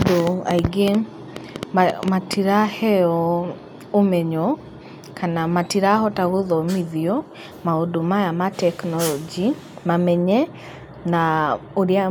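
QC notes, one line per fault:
0.02–2.34 s, train of clicks: right from the start there's a run of sharp ticks, about fifteen of them at roughly 5.6 per second, spaced unevenly rather than like a steady metronome. They all have much the same snappy shape and poke out well above the speech, peaking around 15 dB over it, so they're plain even in the gaps. It's likely interference from nearby gear or a faulty connection or power supply, stopping after about two seconds.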